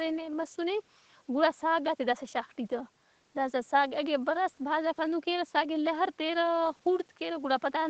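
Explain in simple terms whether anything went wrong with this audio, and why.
Nothing went wrong with this audio; the speech sounds the way it normally does after going through an ordinary call connection.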